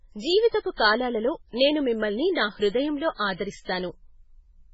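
From the start, the whole speech track carries heavy MP3 compression damage, most likely from a very low bitrate that fits around 16 kbps. Nothing survives above 7.6 kHz, and with weak frequency lines flickering on and off between frames, the sound turns watery and swirly, with chirpy sibilants.

At 0.48 to 0.53 s there's pre-echo: a sharp attack lands late in a transform block, so the quantisation noise sized for it spreads about 51 ms ahead into the quiet gap. You hear a brief hiss leading in, and the onset itself comes out soft and smeared.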